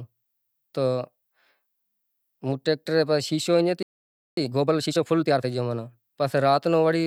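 At 3.83 s the player most likely ran short of buffered data or had its output thread held up, a playback stall, so the speech cuts off in mid-flow and the output stays silent for about 0.55 s, until 4.37 s. When sound returns, it leaves an abrupt hole in the middle of continuous speech.

From 4.37 s to 5.45 s the player works off the backlog built up during that gap through time-compressed catch-up. Short segments are dropped and their neighbours cross-faded together, so the speech runs at about 1.5 times its normal rate while the pitch stays where it was. The result sounds hurried.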